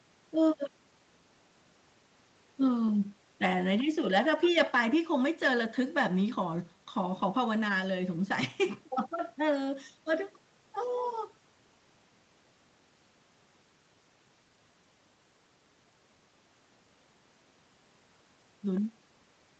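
The speech shows no technical faults: it carries the ordinary character of a call's microphone processing and codec path, with nothing above about 8 kHz, as expected for that route.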